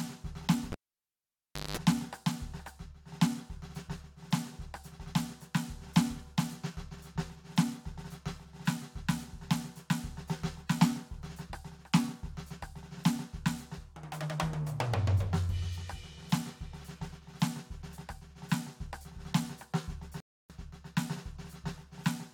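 A live cable was pulled and plugged in at 0.72 s: a pop, about a second of near silence, a 190 ms burst of 50 Hz mains buzz, then another pop at 1.77 s. At 20.20 s a rebuffering stall starves the player, so the music drops to silence for 0.29 s and resumes exactly where it stopped.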